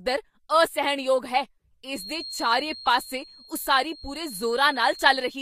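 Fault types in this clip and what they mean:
Feedback whistle: The loudspeaker-to-microphone loop was likely hovering just at the edge of instability, letting a single high frequency keep recirculating without building into a full howl. From about 1.85 s, right after "ਅਸਹਿਣਯੋਗ ਹੈ", a thin, steady tone near 4.2 kHz sits well beneath the speech, roughly 20 dB down, swelling and fading slowly in level and persisting to the end of the clip.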